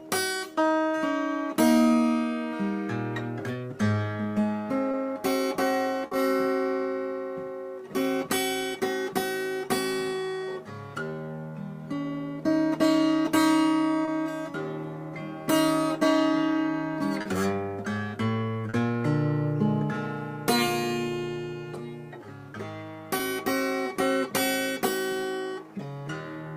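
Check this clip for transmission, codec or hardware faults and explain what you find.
Short concealed packet loss occurs six times, at 4.91–4.95, 6.07–6.13, 14.05–14.09, 17.21–17.27, 18.69–18.75 and 23.17–23.21 s. Each time, 20 or 40 ms of data arrived too late, and the receiver extrapolated the preceding sound before crossfading back, leaving a brief smear or wobble.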